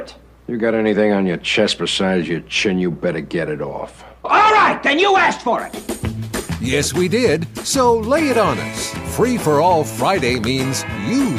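No technical faults are audible.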